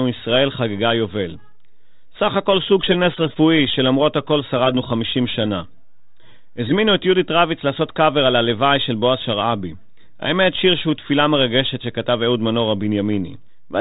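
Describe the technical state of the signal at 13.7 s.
At 13.7 s the speech is intact, with no fault present, carried through a G.726 ADPCM path at 32 kbit/s that is working normally.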